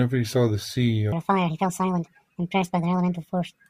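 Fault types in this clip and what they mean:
Section at the wrong speed: from about 1.12 s to the end, the speech suddenly runs 1.64 times faster than the opening, and pitch jumps up with it, roughly ten semitones, so the voice turns squeaky and rushed in one step. Because speed and pitch shift together at a single point, the likely cause is that part being played back or resampled against the wrong clock rather than anything the speaker did.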